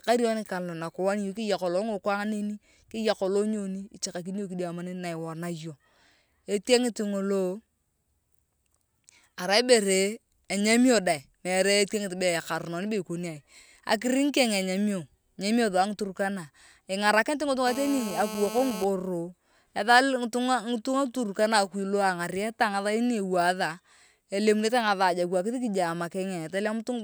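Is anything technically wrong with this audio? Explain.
Yes. From 17.67 to 18.85 s there is GSM phone buzz: the audio circuit rectifies a nearby 2G phone's 217 Hz bursts, producing a steady, raspy, harmonic-rich buzz about 10 dB below the speech.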